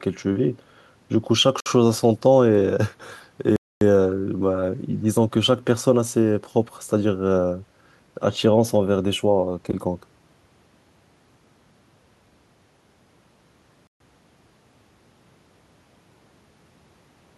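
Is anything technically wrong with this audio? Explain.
Yes, the speech drops out three times. Bluetooth stalls at 1.60 to 1.66 s, 3.56 to 3.81 s and 13.87 to 14.00 s are likely caused by interference delaying packets until the headphones' buffer emptied. Each gap is abrupt silence, lasting 56 ms, 249 ms and 130 ms, before the speech resumes.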